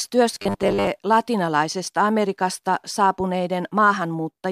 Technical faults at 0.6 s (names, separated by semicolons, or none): robotic sound from repeated short buffers